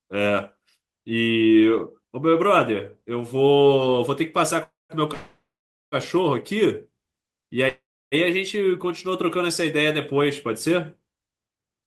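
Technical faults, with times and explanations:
4.63–4.93 s, 5.14–5.95 s and 7.69–8.15 s, call audio freeze: packets were likely held up in transit, draining the jitter buffer. The last sound is stretched into a fading buzz or hiss, then silence for about 0.19, 0.49 and 0.31 s. When the packets arrive, the audio resumes where it stopped, so nothing is lost, but each stall pushes everything later by 0.26, 0.79 and 0.43 s.
11.55–11.84 s, jitter buffer speed-up: with more audio queued than its target, the receiver trimmed short pitch-period slices, around 50 ms in total, to cut the built-up delay. This stretch plays at 113% speed with unchanged pitch, so it sounds briefly hurried.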